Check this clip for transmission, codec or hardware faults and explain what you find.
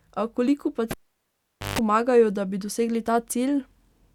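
The speech is interrupted once by a cable pulled and plugged in, from 0.91 s to 1.79 s. A pop opens the gap, then roughly 0.83 s of near silence while the connector is out. As the plug goes back in, the tip touches first and picks up about 0.15 s of 50 Hz mains buzz before full contact restores the signal with a second pop. A network dropout would leave a clean silent gap. What marks this as a cable fault is the pair of pops and the hum burst.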